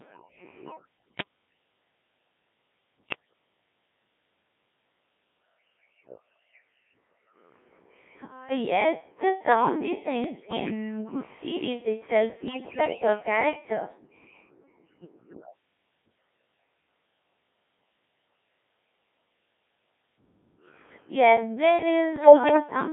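Throughout, the speech carries Codec 2 vocoder damage: heavy, robotic and buzzy, confined to about 200 Hz to 3.5 kHz. The decoder rebuilds the voice from sine waves using only pitch, voicing, energy and envelope, which fits a rate near 1.3 kbit/s.

Bit errors on digital voice radio strike at 1.08–1.25 s, 3.09–3.33 s, 10.24–10.71 s (after "yes the sound", before "good series itself"), 12.48–13.07 s (after "good series itself") and 22.16–22.60 s. Corrupted frame parameters, heaviest in the last two, make pitch, level and tone jump into warbles, bleeps and gibberish.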